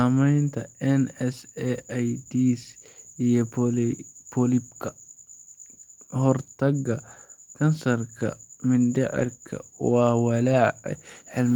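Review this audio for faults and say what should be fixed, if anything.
Packets were lost in transit, and each was replaced by the low-bitrate copy carried in the following packet: a lost packet rebuilt from error correction at 4.87–4.89 s, 9.19–9.25 s and 10.53 s. There's no gap, but these brief stretches sound rougher and noisier. The 40 ms rebuilt at 9.19–9.25 s fits two separate packets. Sending the call over a more reliable, less congested network link would reduce the packet loss that causes this.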